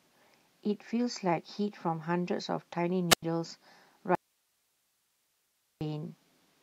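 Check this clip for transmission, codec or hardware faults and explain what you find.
Two faults stand out in this speech clip: a brief wireless squelch mute and a longer dropout to hiss.

From 3.10 to 3.23 s, a short surge of hiss gives way to about 93 ms of near silence before the speech returns. This is a wireless microphone squelch dropout: the FM radio signal faded until the receiver's squelch muted its output.

From 4.15 to 5.81 s, the speech cuts off abruptly for about 1.66 s, leaving only faint hiss roughly 45 dB below the speech, then resumes mid-flow. This is likely an audio dropout to a faint residue: the signal was lost while the downstream path stayed live.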